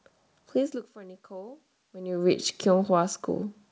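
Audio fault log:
1.00–2.51 s, automatic gain rising: The input level drops by about 20 dB. The gain control treats the input as too quiet and raises its gain. It climbs slowly, by about 4 dB over one and a half seconds. So the voice and the room noise swell together rather than jumping. The rise makes up only a small part of the drop. Throughout, the call-path codec passes nothing above 8 kHz.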